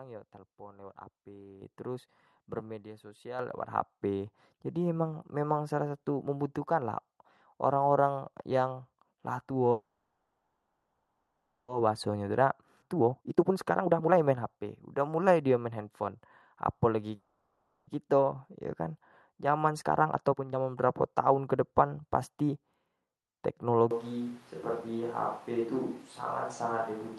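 At 1.62 s the whole sound, voice and background together, jumps up by about 9 dB in a single step, and at 3.39 s it jumps again by about 6 dB. These are microphone volume steps: the call software judged the input too quiet and raised the device's input gain at once rather than gradually. Because the gain changes at the source, the room noise rises with the voice.

From 9.71 s to 11.70 s the audio stops moving forward. The last sound is held as a fading buzz that sinks into about 1.6 s of silence before playback resumes where it left off. This call audio freeze was likely caused by packets stalling in transit, leaving the jitter buffer empty. The receiver filled almost 2 s with concealment, so the audio was pushed later rather than lost.

Right after the resumption, from 11.80 s to 12.42 s, the speech runs slightly hurried at the same pitch, about 110% speed. This jitter buffer speed-up is the receiver trimming a few tens of milliseconds of pitch periods to work off the delay it has built up. 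At 12.81–12.84 s playback jumps ahead, and roughly 0.7 s of audio is gone, with the two sides joined almost directly. This skip ahead is a stretch of audio dropped, either in transit or by the buffer when it overflowed, while later audio was already waiting. A stronger speed-up follows immediately, from 12.86 s to 16.09 s at about 134%. It sounds clearly rushed, with about a second of material cut out in small pieces.

At 17.15–17.89 s a second, shorter freeze stretches the last sound into a decaying buzz for about 0.72 s, again inserted as a gap with nothing missing. Another speed-up from 19.33 s to 22.50 s, at about 123%, removes roughly 0.7 s to recover that delay.

From 23.91 s to the end the voice turns hollow and roomy, with thinner bass. It is about 5 dB quieter, and background noise sits only about 25 dB below it. This is a switch to a distant microphone, likely with the close microphone dropping out and a farther one, such as a camera's, taking over. 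Throughout, the call codec limits the top end to about 12 kHz, consistent with Opus at a moderate bitrate.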